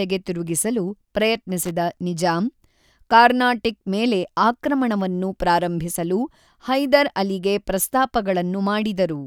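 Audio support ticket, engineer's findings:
Loose connector crackle at 1.63 to 1.71 s, so a short burst of roughly 80 ms. Irregular scratchy crackle. Probable culprit is a worn or dirty contact in the cable or jack. The contact flickers open and shut as it shifts, chopping the signal, and any DC sitting on the line turns each break into a pop. Worth reseating or cleaning the connector, maybe swapping the cable.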